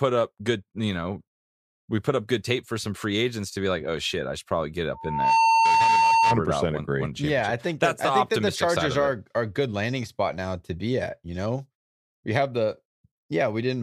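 Right after "I should probably get", a steady tone near 905 Hz swells over roughly 0.4 seconds at 4.94 s and holds until 6.42 s, about 5 dB above the speech. This is loudspeaker feedback squeal: the microphone picked up its own loudspeaker, and the loop's gain exceeded one at that frequency.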